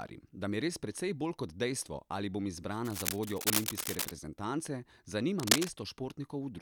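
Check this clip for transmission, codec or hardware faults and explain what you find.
Cable scratch noise appears twice: from 2.85 to 4.12 s, right after "kot dejstvo ali bom", at roughly the speech's level, and from 5.39 to 5.71 s, somewhat louder than the speech. Dense, uneven scratching rides over the audio, likely from a worn cable or connector being moved.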